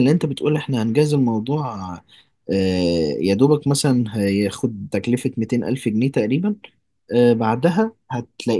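No technical faults are audible.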